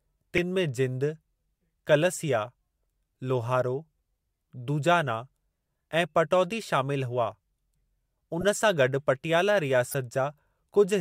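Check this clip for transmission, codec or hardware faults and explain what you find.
Three corrupt frame decoded events turn up in the speech. The decoder played damaged compressed frames, so misread codes put energy at wrong frequencies. Each one sounds like a short blip or squeak.

At 0.37 s comes a brief, fairly loud blip, peaking around -10 dBFS across a few frames. It shows as a thin vertical smear on a spectrogram.

From 8.40 to 8.43 s, a quieter chirp near -20 dBFS fits a single bad frame. It appears as a small, isolated spike in the waveform.

From 9.89 to 9.95 s, right after "गॾु पटियाला", a noisy burst near -20 dBFS spans several frames. It looks like a blocky patch of misplaced energy.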